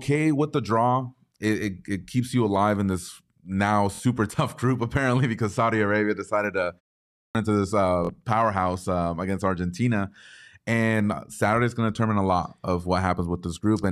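At 3.95 s, just after "alive in this now", a Bluetooth stutter lasts about 48 ms. Packets arrived late or not at all. The receiver replayed its last slice of audio, giving a brief buzz. About 46 ms of sound is lost, which fits two dropped packets. At 7.12 s comes a clipped start after a pause. About 0.4 s of silence follows "decided to". The output device drifted toward sleep and took time to lock on again. Roughly 0.23 s is swallowed, so the sound returns abruptly. At 8.05 s, between "into this uh" and "powerhouse um against", the same stutter recurs. It again drops about 46 ms.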